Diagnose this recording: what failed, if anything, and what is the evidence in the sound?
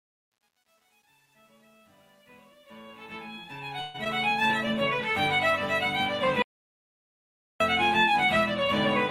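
Sample-format conversion: from 0.0 to 4.46 s the fade turns gritty and stepped, worst up to 3.31 s, fitting truncation distortion to about 9 bits without dither, not codec smearing.

Network: at 3.81 to 3.96 s a call audio freeze holds the last sound for 128 ms, then resumes with nothing missing; the likely cause is a jitter buffer running empty.

Network and call processing: at 4.04 to 4.07 s short concealed packet loss skips 40 ms, bridged by a 9 ms fill. Unlike the freeze, audio is lost and timing pulls back by roughly 30 ms.

Analogue wiring or driver: an audio dropout to silence runs 6.42 to 7.60 s, 1.18 s with no room tone and no fading continuation. The likely cause is a lost input.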